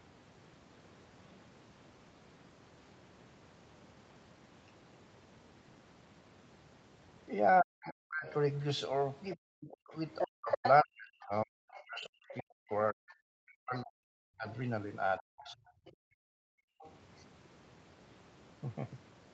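From 7.61 to 8.27 s the talker is pulled down hard, by something like 40 dB at the deepest point, for roughly two-thirds of a second. This is speech suppressed in double talk: with both ends active at once, the echo canceller likely could not tell the near talker from the loudspeaker echo and attenuated everything on the microphone path. The voice dips and thins out rather than fading smoothly.

At 9.34 s the other side's voice starts leaking through, and until 10.7 s it sits at roughly the same level as the talker. The residual echo was likely not fully removed from the microphone signal, so a second voice is clearly audible alongside the first. Overlapping this, from 9.36 to 15.62 s, the suppression in double talk returns across about four seconds in total. The talker again drops by as much as roughly 40 dB in places, cutting out in pieces while the far end is speaking.

From 11.72 to 16.91 s the leakage continues at a lower level, something like 20 dB under the talker. 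It is a faint second voice underneath rather than a competing one.

Between 15.92 and 16.81 s the background is gated by the echo canceller. The room sound drops by about 40 dB for roughly a second while the loudspeaker plays, then returns once the canceller releases. This happens against a call path band-limited at 8 kHz.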